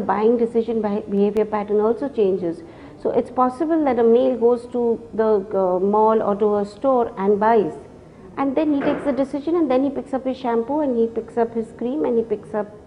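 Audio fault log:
1.17–1.75 s, CD scratch ticks: four short ticks in just over half a second, the longest lasting about a millisecond. A blemish on the disc surface spoils more data than the player's error correction can restore, and the damage returns once per revolution. Each time, the player fills the gap by interpolating or briefly muting the affected samples, so the sound is punctuated by a regular train of tiny clicks rather than one isolated pop.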